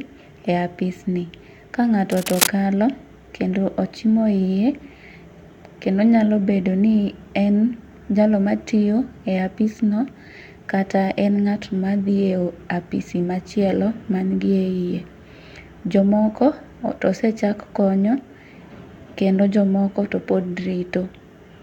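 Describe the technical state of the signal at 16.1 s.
At 16.1 s the speech signal is intact, with no dropout, clipping, glitch or other fault audible at that point.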